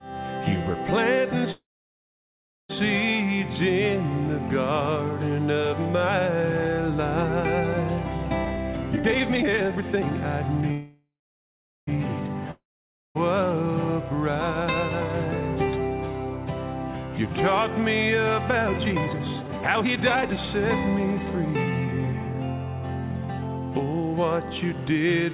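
At 1.52 s there's a call audio freeze lasting until 2.71 s. The last bit of sound trails off into about 1.08 s of silence, then picks up right where it stopped. That's likely packets stalling and the jitter buffer running dry, so roughly 1.17 s of delay gets inserted but nothing is lost.

From 8.45 to 10.12 s the jitter buffer speed-up kicks in. The receiver trims tiny pitch-period slices over and over to drain its backlog, so the audio plays at about 163% speed with the pitch unchanged. It sounds rushed and sheds roughly a second.

A second call audio freeze runs from 10.71 to 11.89 s, likely from the same kind of stall. The sound fades into about 0.8 s of silence and then resumes intact, adding around 1.16 s of delay.

At 12.51 s comes a long network dropout lasting until 13.17 s. After a brief fading tail there's about 0.54 s of silence, and when the audio returns roughly 0.64 s has been skipped for good. 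The likely cause is packets lost outright rather than delayed.

Then from 18.62 to 22.34 s there's another jitter buffer speed-up, milder at about 133%, which clips out roughly one and a half seconds and gives that stretch a hurried feel.

Throughout, the call path cuts everything above 4 kHz, which points to a narrowband codec like G.711 mu-law.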